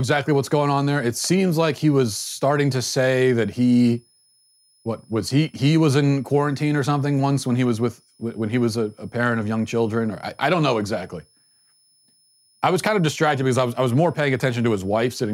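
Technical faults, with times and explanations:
Throughout, switching supply whistle: a faint high whistle sits roughly 40 dB below the speech, wandering between about 5.1 and 5.3 kHz. A switching power supply is running in an audible burst mode or beating with another supply, and its frequency shifts as the load changes.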